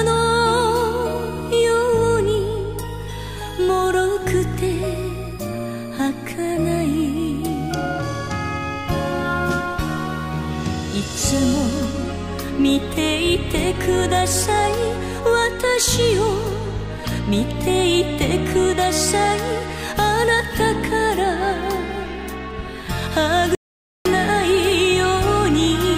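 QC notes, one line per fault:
23.55–24.05 s, audio dropout to silence: the sound cuts off abruptly and returns after about 0.5 s (504 ms) of silence, with no room tone or noise floor remaining in the gap. A dead-silent gap like this, rather than a quiet passage, points to the input being lost while recording continued, likely through a momentary disconnection, link failure or stray mute. Whatever sound occurred during that half-second is missing and cannot be recovered.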